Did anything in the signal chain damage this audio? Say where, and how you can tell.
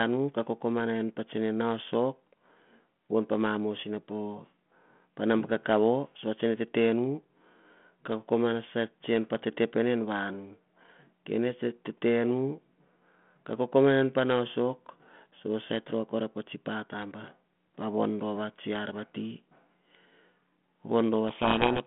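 Yes. A codec payload misread damages the final stretch, from 21.28 s to the end at 21.86 s. The stage is the codec. The speech is suddenly buried in harsh, rasping distortion. The line is G.726 ADPCM at 32 kbit/s, band-limited to about 150 Hz to 3.4 kHz, and before 21.28 s it carries only light coding noise. Here the G.726 code words are read with their bit order reversed, so each prediction step is wrong and the adaptive decoder turns them into grit.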